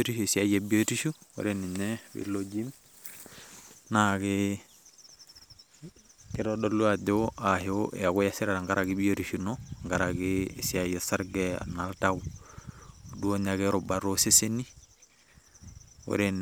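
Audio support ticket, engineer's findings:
No audible faults found in this speech recording.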